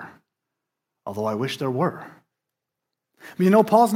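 No technical faults can be heard anywhere in the speech.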